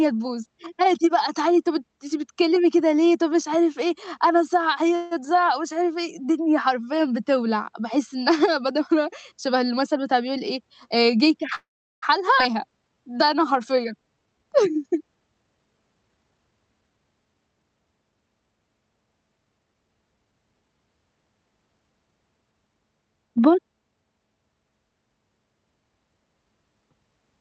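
Speech carried over a call link, band-limited at 8 kHz, which fits a wideband call codec such as Opus, shows two call audio freezes. At 4.95 to 5.13 s the last sound is held as a fading buzz or hiss for about 160 ms. At 11.55 to 12.04 s the hold lasts about 470 ms, of which roughly 380 ms decays into silence. Both were likely caused by delayed packets draining the jitter buffer. Playback then resumes where it stopped, so nothing is lost but a gap is inserted. On a spectrogram each appears as a smeared, stationary band fading out, followed at the second event by a blank strip. The waveform shows a dwindling, repetitive envelope. From 9.96 to 11.42 s a jitter buffer speed-up runs the audio at about 106% with pitch unchanged, trimming roughly a tenth of a second in tiny pitch-period cuts so the talker sounds slightly hurried. The spectrogram keeps its harmonic spacing but the syllables are packed closer in time. 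At 12.38 to 12.41 s a skip ahead drops about a fifth of a second of audio. The two sides are butted together almost directly, leaving a clipped transition with no gap. A spectrogram shows an abrupt discontinuity where formants jump without a pause. From 12.53 to 14.45 s a jitter buffer slow-down repeats single pitch periods to rebuild reserve, adding about 215 ms and playing at roughly 89% speed with the same pitch. Sounds are drawn out, and the waveform shows near-identical cycles repeated in stretched segments.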